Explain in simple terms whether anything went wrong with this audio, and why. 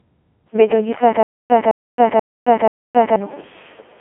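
Yes. The speech went through a Codec 2 vocoder, a very low-rate digital radio codec. It sends only a rough outline of the voice, and the decoder rebuilds speech from simple tones, so the whole clip sounds robotic and buzzy, with nothing above about 3.5 kHz.

From 1.23 to 3.16 s there is a stutter with silent gaps, likely from the stream stalling and retrying. A 0.21 s scrap of sound plays again four times, each followed by about 0.27 s of dead silence, so the audio meant for that stretch is lost.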